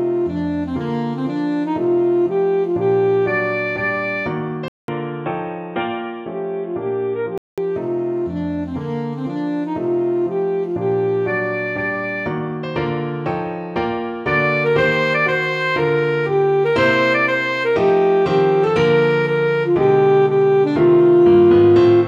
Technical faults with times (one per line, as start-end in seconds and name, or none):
4.68-7.58 input switched to a poorer device